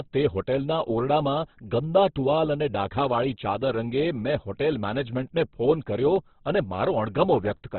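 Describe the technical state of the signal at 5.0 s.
At 4.99 s a bit error spike occurs: a flipped bit in memory or on a digital link throws about three consecutive samples off by a power of two before they snap back. The result is one sharp, broadband tick unrelated to the speech, just before "ફોન કર્યો અને".

Underneath, the speech is narrowband and grainy, with nothing above 4.5 kHz. This is likely heavy Opus compression in its CELT mode at a very low rate, consistent with about 12 kbps, which narrows the bandwidth and roughens tones.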